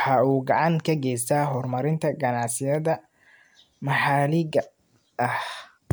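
Speech with no audible faults.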